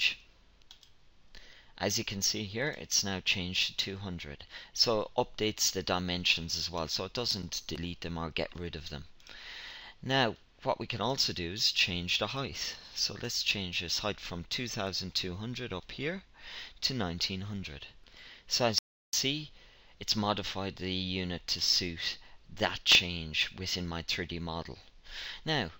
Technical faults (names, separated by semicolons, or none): processor overload crackle; audio dropout to silence